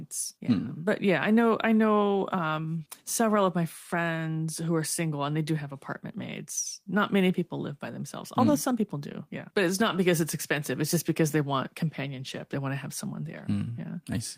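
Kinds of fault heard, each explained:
No kinds of fault are heard in this speech.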